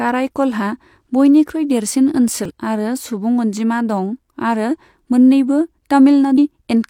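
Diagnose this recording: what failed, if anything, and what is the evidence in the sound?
Two brief blips break into the speech, at 2.45–2.51 s just after "बयनिख्रुइ देरसिन" and at 6.34–6.39 s. This is damaged data in a compressed stream: corrupted bytes made the decoder misread frames and lose sync until it found the next valid frame header.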